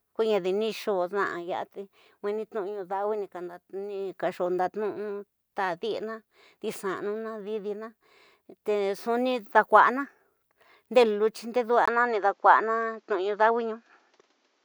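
Speech that changes character abruptly at 11.86 s: after a brief gap of about 20 ms, the sound turns duller and boxier and its level shifts by roughly 5 dB. From then until the end, nothing is present above 7.6 kHz, and a new, faint noise floor appears, around 45 dB below the signal. This is likely an input switched to a poorer device. On a spectrogram, the upper band cuts off sharply at the switch point, and the waveform shows a short dropout and a step in amplitude.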